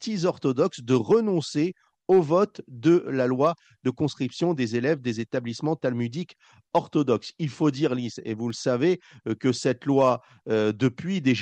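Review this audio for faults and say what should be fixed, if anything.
Around 8.50 to 9.37 s there's a short run of CD scratch ticks: five little clicks spaced roughly evenly, about six a second, each well under a millisecond. That steady spacing is the giveaway. A scratch or blemish on the disc wipes out more data than error correction can rebuild, once per revolution, so the player patches or mutes a tiny stretch each turn. Worth re-ripping that section. To prevent it, clean or replace the disc and use a secure ripping mode that rereads until results match.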